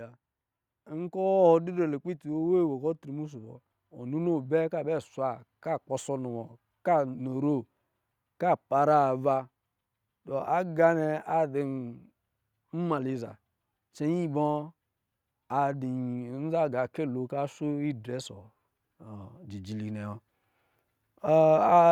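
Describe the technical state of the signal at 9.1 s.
At 9.1 s the speech signal is intact, with no dropout, distortion, or other technical fault to be heard at that point.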